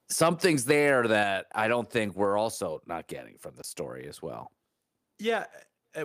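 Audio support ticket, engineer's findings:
Microphone overload, 0.21–1.19 s, ending before "I don't think". Likely cause: mic input gain set too high, driving peaks about 5 dB past converter full scale. Tops of the loudest waveforms get flattened, roughly 0.7% of samples. Audible as harsh, crackly edges on peak syllables.

Microphone volume stepped down at 1.23 s, just before "I don't think". Probable component: call software's automatic gain control reacting to the clipped peaks, likely by dropping the device input volume in one jump of about 4 dB. Level of voice and background falls abruptly together, with no ramp.

Block of digital silence, 1.52–1.54 s, just before "I don't think". Output buffer most likely not filled in time, so 20 ms of samples went to zero. Hard cut to silence and back with no fade, giving a brief hole in the audio.

Block of digital silence, 3.62–3.64 s. Same mechanism and same 20 ms length, consistent with a repeated buffer underrun in the playback or processing path. 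Heard as a short dropout.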